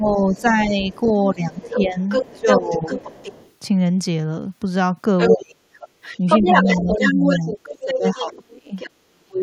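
From 0.0 to 0.76 s the talker dips by about 10 dB in short patches, and again from 1.34 to 2.91 s by about 15 dB over roughly a second. This is likely speech suppressed in double talk: with both ends talking, the echo canceller turned down the near voice along with the echo. Over 0.35 to 3.52 s a second voice sits underneath, about 5 dB below the talker, likely the other side's voice leaking through from the loudspeaker because the echo canceller did not fully remove it.

From 5.18 to 8.9 s that leaked voice returns at roughly the talker's own level. Meanwhile the talker drops by up to about 30 dB from 5.3 to 5.59 s, then by up to about 40 dB across 6.19 to 9.43 s, cutting out for around two seconds in pieces. The same double-talk suppression is likely at work.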